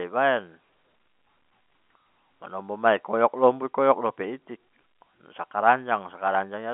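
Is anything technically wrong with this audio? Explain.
No, nothing stood out as wrong on listening to this speech.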